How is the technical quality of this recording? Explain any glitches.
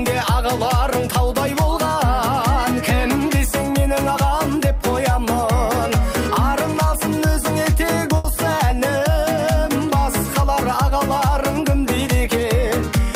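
There is one audible glitch, a short stall from a late packet at 8.17 to 8.26 s. A packet arrived late and the jitter buffer ran dry, so the receiver held the last sound for about 70 ms, then resumed from the same point with nothing lost. It sounds like a brief held smear with a slight buzz or dip. On a spectrogram it shows as horizontally smeared, frozen bands; the waveform shows a short repeating, near-periodic stretch.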